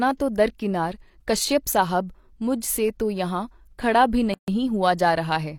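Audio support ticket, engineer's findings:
Gap at a join of encoded pieces, 4.34–4.48 s: separately encoded segments joined untrimmed, encoder delay plus final-frame padding left in. About 140 ms gap with smeared edges mid-speech, then speech resumes where it stopped.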